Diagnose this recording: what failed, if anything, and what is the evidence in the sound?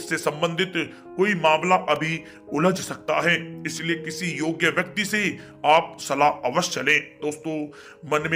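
An electrical switching spike enters the analogue wiring at 1.96 s. A single sharp snap, peaking near -20 dBFS, sits on top. A nearby switch arc is the likely cause.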